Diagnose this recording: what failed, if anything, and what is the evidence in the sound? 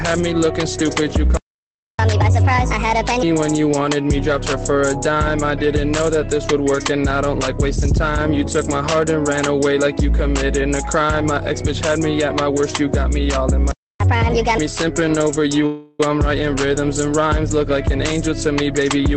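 At the playback stage the player stopped delivering audio, likely because its buffer ran dry or its output thread was blocked. This playback stall shows as a hard dropout from 1.37 s to 1.99 s, about 620 ms of silence cutting the sound off mid-flow. When output resumes, the backlog has to be recovered afterwards.

That recovery produces catch-up at higher speed, also at the playback stage. The player resamples its queued audio at 1.5 times normal rate from 1.99 s to 3.23 s, and again from 14.00 s to 14.58 s. Because the resampling raises speed and pitch together, both stretches sound rushed and shifted up by roughly a fifth.

A call audio freeze appears in the network and jitter-buffer path from 15.66 s to 16.00 s, likely caused by packets held up in transit. With its buffer empty, the receiver extends the last sound for 330 ms as a fading buzz or hiss rather than going silent. When the delayed packets arrive, the audio carries on where it left off, so nothing is lost. 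Instead, 330 ms of extra delay is inserted.

The jitter buffer speed-up comes from the same receive path, working off that excess delay. From 18.27 s to the end, the receiver repeatedly cuts out short pitch-period-length slices, around a tenth of a second in total. The result is playback at about 112% speed with pitch unchanged, so the closing stretch sounds hurried. The codec's band-limiting, with nothing above 8 kHz, is present throughout the clip.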